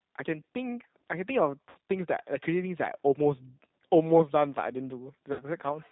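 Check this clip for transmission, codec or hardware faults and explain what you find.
The speech runs through a G.729 codec for its whole length, and VoIP packet loss concealed by the speech codec interrupts it twice.

The G.729 coding is plainly audible throughout. At 8 kbit/s, the codec does not send the waveform. It sends a vocal tract filter, a pitch predictor and a few pulses per frame, and the decoder rebuilds the voice from those. Nothing above 4 kHz survives. The voice sounds narrow, slightly rough and synthetic.

Two dropouts are concealed by the decoder, from 1.69 to 1.76 s and from 5.33 to 5.44 s. Each gap holds about 60 ms of missing audio, which fits three lost 20 ms packets. The decoder fills the hole by repeating its last pitch and filter while turning the gain down. The result is a brief stretched sound, a buzzy tone or a coloured noise, that fades. Because each frame depends on the previous one, the voice stays weak or distorted for a short while after the audio returns.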